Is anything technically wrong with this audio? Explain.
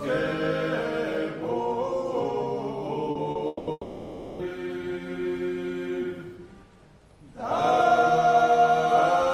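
Yes. Around 3.11 to 3.18 s and again 3.31 to 3.38 s there's short concealed packet loss: about 40 ms went missing each time, and the receiver stretched the preceding sound over the hole, giving a quick smear or wobble.

Then from 3.47 to 3.70 s and 3.71 to 4.42 s, a likely long network dropout: the receiver fills about 200 ms and then 680 ms with a fading continuation of the last sound, the second ending in a brief near-silence before the audio picks up, minus the lost stretch.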